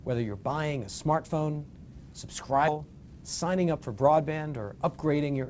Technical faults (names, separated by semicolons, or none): skip ahead; jitter buffer speed-up